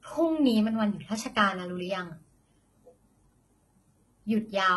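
Speech with heavy HE-AAC compression throughout: gritty, metallic s sounds, likely from treble rebuilt at a bitrate near 16 kbps. A spectrogram shows nothing above 11.8 kHz.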